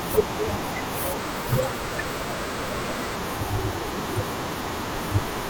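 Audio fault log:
1.19–3.15 s, section at the wrong speed: speech runs about 1.22 times too fast, so it sounds hurried and roughly three semitones higher, likely from a clock mismatch. The spectrogram shows harmonics stepping abruptly upward at the start and back down at the end, with time-compressed waveform detail.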